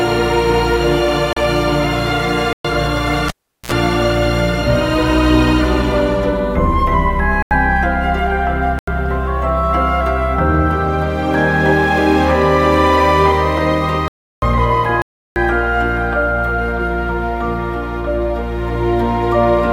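Blocks of digital silence hit at 1.33, 2.53, 7.42, 8.79, 14.08 and 15.02 s. Each time, the sound cuts out for 37 to 341 ms with no fade. The 85 ms and 341 ms gaps fit 4096- and 16384-sample buffers.

At 3.28 s there's a cable pulled and plugged in: a pop, about 0.39 s of near silence, a short 60 Hz buzz as the tip touches, and another pop as the sound returns at 3.72 s.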